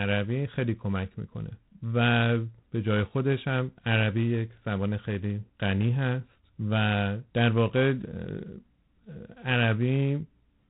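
G.726 ADPCM coding runs throughout this speech clip, at a rate that sounds like 24 kbit/s, three bits per sample of prediction difference. That coarse quantisation leaves a harsh, rasping hiss riding on the speech and rising with its level, and nothing passes above about 3.9 kHz.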